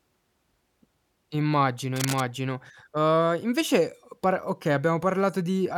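A speech recording with a single fault. From 1.96 to 2.21 s, cable scratch noise breaks in as a dense, ragged rustle, roughly 10 dB below the speech. A worn cable or connector being moved, with its contact resistance jumping rapidly, is the likely cause.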